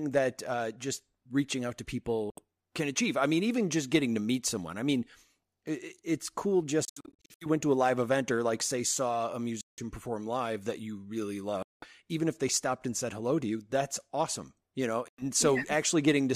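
Short holes of silence cut into the speech at 2.30 s (70 ms, after "just reaching out to"), 6.85–7.46 s (a stutter of gaps up to 70 ms, after "it it's cool"), 9.61 s, 11.62 s (before "even if they stopped") and 15.08 s, with sound resuming as if it had played on. This is likely a Bluetooth dropout, where late packets are discarded.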